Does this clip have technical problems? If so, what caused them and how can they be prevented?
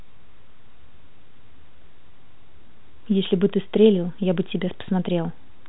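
No, no technical faults here.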